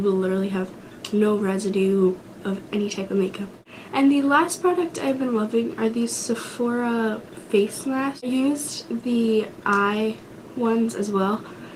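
No technical faults can be heard anywhere in this recording.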